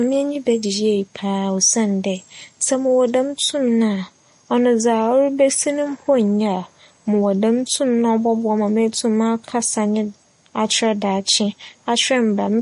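Throughout the speech, the high end stops cleanly at 10.6 kHz, and the damage is plainly audible: sibilants turn swirly and metallic, quieter detail has a watery, shifting quality, and consonant onsets smear. This is likely MP3 compression at a low bitrate, which fits a stream near 40 kbps. Short of bits, the encoder discarded the treble above a fixed cut-off and dropped weaker frequency components that flicker in and out between frames.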